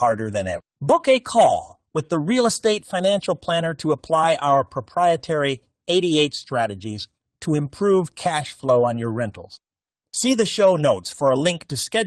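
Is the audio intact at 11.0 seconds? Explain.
Yes, the speech at 11.0 seconds is intact, with no dropout, click, distortion or other fault at that moment.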